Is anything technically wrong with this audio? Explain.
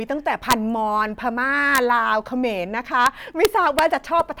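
Yes. Integer overflow cracks hit the speech at 0.51–0.53 s, 1.75–1.78 s, 3.06 s and 3.45–3.79 s. Peaks exceeding the integer limit, by about 4 dB at the first, wrap to the opposite sign instead of being held, throwing the waveform across its full range. Each sounds as a violent crack, harsher than clipping.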